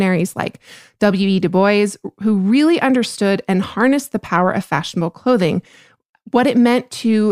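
No technical faults can be heard anywhere in it.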